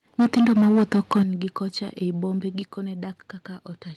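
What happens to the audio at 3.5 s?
At 3.5 s the speech is intact, with nothing more than the ordinary coding of an Opus call path around 32 kbps, whose band limit near 12 kHz is simply how such a call sounds.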